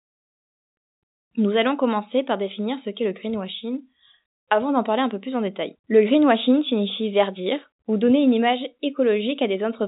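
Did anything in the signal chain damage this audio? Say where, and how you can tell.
No, nothing in the signal chain damaged this audio.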